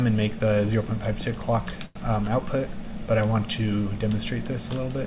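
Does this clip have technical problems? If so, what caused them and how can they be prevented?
Yes. A short stall from a late packet at 1.86 to 1.97 s: the jitter buffer ran dry, so the last sound was stretched for about 92 ms, nothing lost, delay increased. An adaptive jitter buffer with a little more headroom, or a steadier network path, prevents it. Nothing above 4 kHz is heard, which fits a narrowband call codec.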